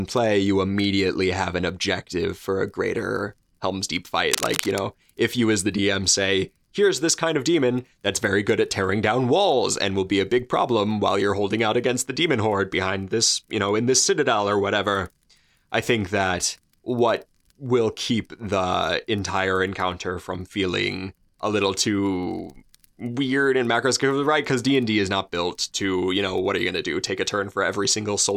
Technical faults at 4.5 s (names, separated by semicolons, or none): cable scratch noise